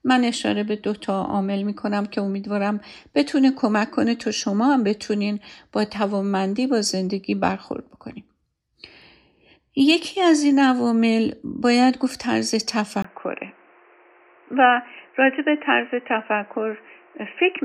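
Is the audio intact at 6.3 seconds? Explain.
Yes, at 6.3 s the speech is intact, with no dropout, click, distortion or other fault audible at that moment.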